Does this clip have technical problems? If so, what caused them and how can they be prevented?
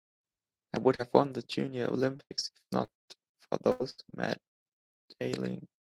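Yes. A brief smear from 0.95 to 1.01 s is short concealed packet loss: about 40 ms of speech arrived too late, and the receiver stretched the preceding sound to cover it. Choppy, robotic stretches from 2.17 to 2.90 s and from 3.32 to 4.54 s come from repeated packet loss, where gaps of up to about 80 ms recur and each is patched before the next arrives. Both can be prevented with a steadier network path, a larger jitter buffer, or forward error correction.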